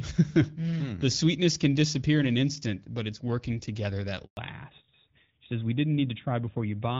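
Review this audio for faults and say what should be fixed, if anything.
A handover gap runs from 4.25 to 4.37 s, right after "it's working together that". The call switched networks, no speech frames arrived, and 120 ms of audio is lost to silence.

A fallback to narrowband follows at 4.37 s and lasts to the end. The clear HD Voice sound, which fits AMR-WB, gives way to a narrowband codec consistent with AMR-NB. Nothing above 4 kHz passes, so the sound turns duller and rougher.

To prevent both, keep the call on networks that support HD Voice throughout, with seamless handover that carries AMR-WB across the switch.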